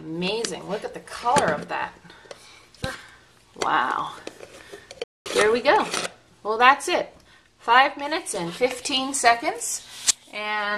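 At 5.04 s the sound cuts off abruptly and stays silent for about 220 ms, until 5.26 s: a playback stall, likely the player starving for data or its thread being blocked. A waveform shows a flat gap; a spectrogram shows an empty vertical band.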